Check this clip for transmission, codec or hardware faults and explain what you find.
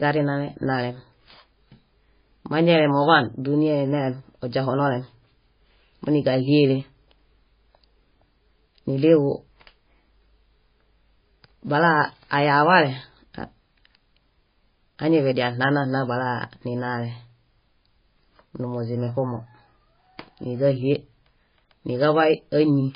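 One fault runs through the whole recording. It is heavy MP3 compression, and that is the likely cause of what is heard. Nothing reaches above 5 kHz. The encoder has cut the treble there because it ran short of bits. The damage fits a very low bitrate, under about 20 kbps. Weak frequency lines switch on and off from frame to frame. The speech sounds watery and swirly. There are metallic chirps on s sounds, and attacks are smeared.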